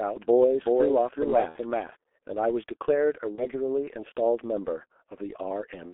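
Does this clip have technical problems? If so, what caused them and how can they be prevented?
Yes. Throughout, the speech passes through a G.723.1 codec at 6.3 kbit/s, confined to a 300 Hz to 3.4 kHz line band. Heavy compression with slow 30 ms model updates leaves it muffled and hoarse with smeared consonants. A spectrogram shows an empty band above 3.4 kHz and coarse, blocky harmonics. Prevent it by using a wideband codec at a higher bitrate.

From the start until 1.96 s, a doubled audio track is present. A full-band copy about 5 dB quieter trails by around 400 ms, with no reverberant tail, and stops abruptly at 1.96 s. The likely cause is a second, slower capture path mixed in. The waveform shows each burst repeated, about 5 dB smaller. Prevent it by routing only one capture path into the mix.

VoIP packet loss concealed by the speech codec occurs at 1.49 to 1.58 s (60 ms lost, which fits two codec frames) and at 3.35 to 3.47 s (30 ms lost). 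The decoder stretched its last pitch and filter into a fading buzzy tone or coloured noise, and the voice stays weakened briefly afterwards. The spectrogram shows smeared, repeated harmonics that thin out. Prevent it with a more reliable network path, forward error correction or a larger jitter buffer.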